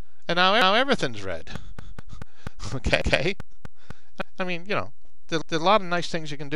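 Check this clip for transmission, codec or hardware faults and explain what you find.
Two faults turn up: a repeating stutter from overlapping chunks, and a regular train of clicks in the middle of the clip.

Overlapping chunks show up at 0.62, 1.82, 3.02, 4.22 and 5.42 s. Each new 1-second block starts 200 ms before the previous one finished, so at every join that 200 ms stretch plays twice. Since the blocks are evenly sized, you get a little hiccup, a stutter with a bit of a click, roughly every 1.2 s throughout.

The train of clicks runs from about 1.56 to 3.92 s. It's around ten sharp, near-identical ticks at a steady 4.1 per second, sitting a few dB above the sound itself. Pulses that regular and uniform are most likely interference from nearby equipment or a faulty connection pushing spikes into the signal, and they tick away regardless of what the audio is doing.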